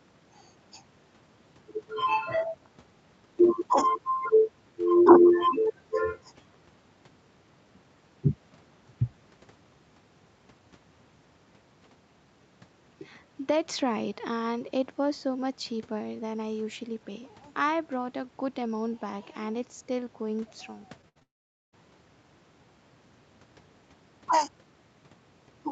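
Short concealed packet loss at 21.01 s and again at 21.19 s: each time about 20 ms of speech failed to reach the decoder, and the receiver covered the hole by extending the preceding sound before blending back, leaving a quick smear or wobble.

Burst of packet loss from 21.09 to 21.17 s: roughly 60 ms of consecutive speech went missing, so the receiver stretched the last sound into a briefly held, fading buzz or hiss, and the speech resumes further on with that stretch gone.

Long network dropout from 21.23 to 21.74 s: the speech stops, a brief fading continuation gives way to about 460 ms of silence, and talk returns half a second further on. The likely cause is that no audio arrived for that stretch.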